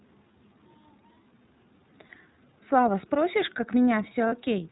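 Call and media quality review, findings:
iLBC codec, whole clip. Speech band-limited, nothing above 4 kHz. Slightly rough, synthetic timbre, plainly audible. Narrowband excitation coding, each frame coded independently. Fits the 13.33 kbps mode with 30 ms frames.

Lost iLBC frames, 2.07–2.10 s and 4.29–4.33 s. Brief held, faintly buzzy vowel, about 30 ms each. Decoder concealment repeating the last pitch cycle with added noise. Fits a single dropped 30 ms frame each time. Clean recovery immediately after.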